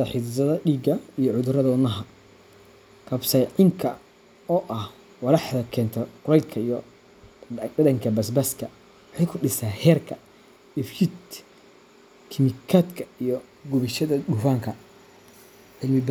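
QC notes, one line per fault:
No faults were found in the speech. Nothing at any point calls for a QC flag.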